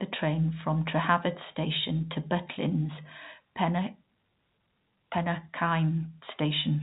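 No technical faults are audible.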